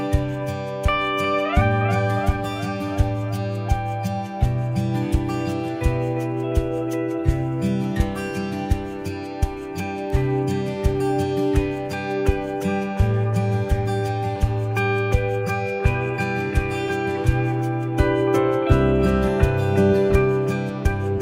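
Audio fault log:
10.10 s, bit error spike: a single-sample click stands out as one sharp, isolated tick with no relation to the surrounding sound. It points to one flipped bit in a stored or transmitted sample word, which throws that one value off by a power of two before the next sample returns to normal. Because the jump lasts only one sample, its energy is spread across the whole spectrum rather than sitting at any particular pitch.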